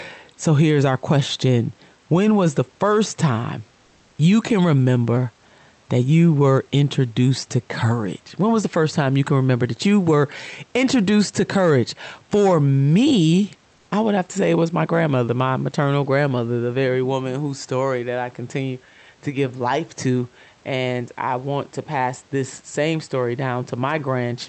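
Comfort noise in place of the background occurs from 13.75 to 13.87 s, just before "I would have to". For about 120 ms the room's real background becomes a smooth, featureless hiss about 1 dB quieter, likely Opus discontinuous transmission filling a gap judged silent.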